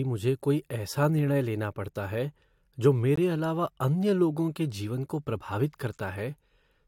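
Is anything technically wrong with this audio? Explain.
Yes. At 3.16 s, right after "लेना पड़ता है जो" and before "अलावा अन्य लोगों के", the speech drops into a brief, hard-edged hole of pure silence, about 18 ms long, heard as a tiny click-like stutter. This is a gap between stream segments: the timestamps of two consecutive chunks of the stream don't quite meet, and the player pads the mismatch with silence. Nothing is cut out of the speech; the roughly 18 ms of silence is inserted, nudging everything after it slightly later.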